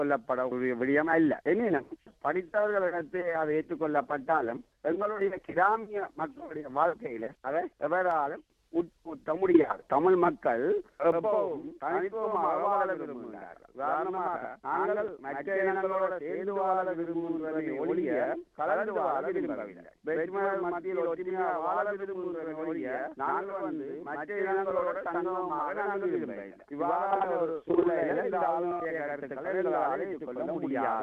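From 11.12 s to the end, the audio carries a channel delay (doubling). One channel runs late by 85.33 ms, which fits a 4096-sample buffer at 48 kHz, and the two channels are then summed to mono. At that spacing the late copy does not fuse with the original. It sits behind it as a distinct slap echo at equal level, so every onset is heard twice in quick succession.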